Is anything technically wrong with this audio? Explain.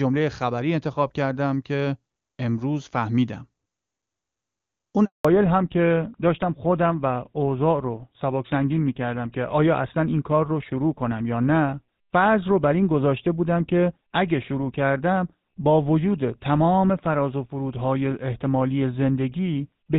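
Yes, the call suffers a handover gap and then a fallback to narrowband.

At 5.05 s the speech cuts out for 200 ms, until 5.25 s. No speech frames arrived while the phone switched networks, so the sound fades within a few tens of milliseconds into true silence rather than the stutter or repeated fragments of ordinary packet loss.

From 5.25 s to the end, everything above 4 kHz is gone. Before the gap, the sound points to HD Voice at about 23.85 kbit/s and is clear. After it, the speech turns dull and rougher, consistent with a drop to GSM full rate. Unlike a simple low-pass filter, it arrives abruptly with the handover and adds roughness as well as the lost treble.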